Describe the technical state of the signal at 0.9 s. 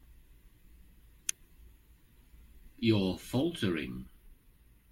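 At 0.9 s the speech signal is intact, with no audible fault at that point.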